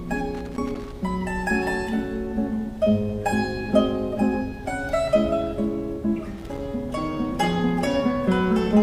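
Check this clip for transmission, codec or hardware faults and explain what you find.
A hardware fault shows up twice as loose connector crackle, from 0.35 to 0.94 s and again from 6.38 to 6.59 s. A worn or dirty contact keeps opening and closing, chopping the signal, so the sound breaks into an irregular, scratchy burst of crackle.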